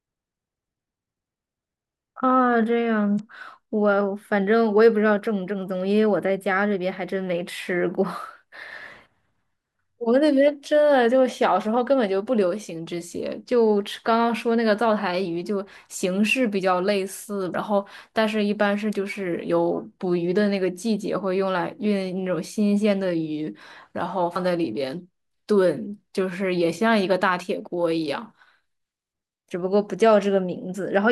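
Damaged data in a compressed stream bursts through three times, at 3.16 to 3.20 s, 17.51 to 17.55 s and 24.35 s, where corrupt frames throw the decoder out of sync, giving short glitches.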